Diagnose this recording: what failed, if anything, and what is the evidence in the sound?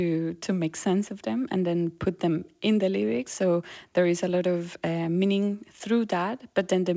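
Nothing in the recording points to a failure at any stage. The speech has come through a call path, and the lack of content above 8 kHz fits a wideband call codec such as G.722 working as intended.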